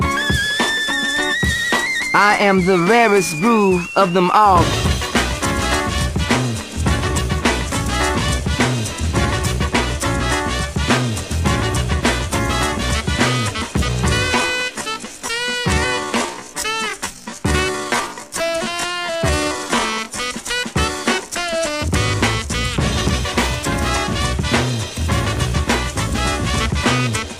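From 14.3 to 20.22 s there's a time-stretched section: the pace drops to about 0.64 speed with pitch unchanged, sounding dragged, likely software padding length by repeating short pieces.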